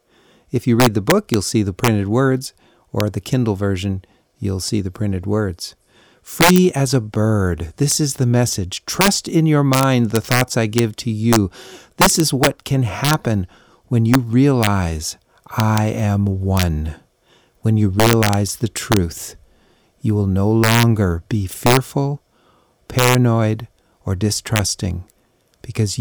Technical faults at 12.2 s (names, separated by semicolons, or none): integer overflow